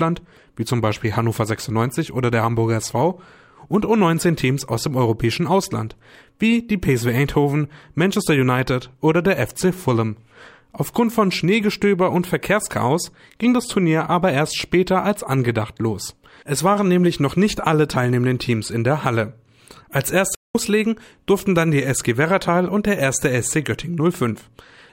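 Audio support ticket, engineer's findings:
Playback stall, 20.35–20.55 s. Output goes fully silent for about 198 ms in mid-flow, then sound continues. Likely cause: player starved of buffered data or its output thread blocked. Differs from a short dropout or gain dip: a clean, sustained silence of nearly 0.2 s, not a brief click, crackle or partial level drop.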